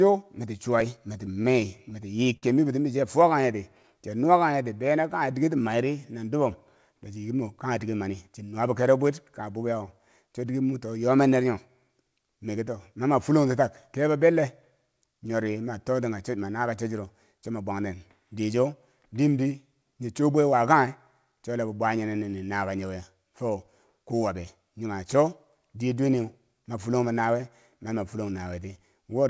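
From 0.96 to 3.86 s the speech carries scattered short gaps. About ten packets went missing or arrived late, the longest gap around 50 ms and roughly 150 ms filled in all. The receiver continued the last sound through each hole, so you hear isolated ticks and small smears. Unlike a time-stretch, the pace stays the same.

Overlapping that, from 2.97 to 5.11 s, a jitter buffer slow-down repeats single pitch periods to build reserve. It adds 132 ms and runs at 94 % speed. Syllables drag, but the pitch holds steady, which separates this from a tape-style slowdown.

Jitter buffer speed-up appears three times. From 7.16 to 8.48 s it runs at 110 %, dropping about 150 ms, and sounds clearly hurried. From 20.53 to 21.40 s, between "nyi cho bwe" and "chola bo bwa", it runs at 105 % and removes around 50 ms. From 26.24 to 27.94 s it runs at 102 % and drops about 40 ms. Whole pitch periods are cut, so pitch never rises. 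Across the clip, the call path shows nothing above 8 kHz, which fits a wideband G.722 link.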